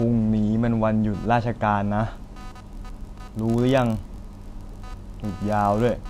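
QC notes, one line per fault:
Throughout: computer activity noise. A buzzy, chirping layer sits under the speech the whole way. It pulses at around 300 Hz, roughly 25 dB below the speech. Its level does not rise and fall with the talking. It follows something else. Processor, graphics or mouse activity shifts the ground shared with the audio circuit. That interference leaks into the signal path. So the noise tracks the computer's workload, not the speech.
2.16 s to 6.09 s: filter restarted on every block. From 2.16 s to the end, a steady buzz at 46.9 Hz appears under the speech. A processing filter is losing its state between blocks. Each block starts from silence. That start produces a small transient. These transients repeat at the block rate, which fits a 1024-sample block. The buzz grows louder with the speech and fades in quieter moments, because each transient scales with the signal level.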